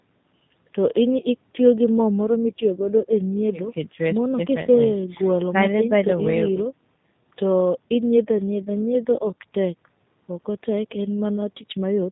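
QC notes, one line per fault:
Throughout: G.729 codec (G.729A, 8 kbit/s), plainly audible; speech rebuilt from a vocal tract filter, pitch predictor and sparse pulses sounds rough and synthetic, and nothing passes above 4 kHz.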